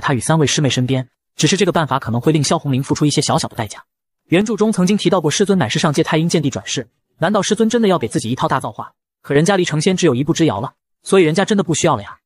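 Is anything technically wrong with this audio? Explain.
Yes. The level falls abruptly by about 6 dB from 4.41 to 4.60 s and again from 8.63 to 9.35 s, then snaps back. This is likely one channel drops out: with one side of the stereo pair lost and the result summed to mono, shared content halves in level. Unlike a fade or gain ride, the steps are instant and flat, and unlike a full dropout the sound never goes silent.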